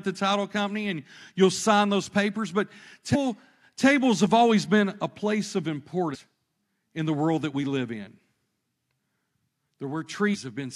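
At 3.14 to 3.16 s, the speech breaks into a short, harsh blip. It lasts about 20 ms. This is damaged data in a compressed stream. Some bytes in the encoded file were lost or overwritten. The decoder misreads those frames and loses sync. It then hunts for the next valid frame header. The same chirp returns at 6.13 to 6.16 s. A third one comes at 10.34 to 10.36 s, near the end.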